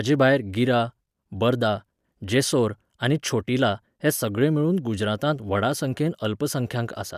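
Nothing stands out here at any point in the recording, so there's no technical fault to walk through.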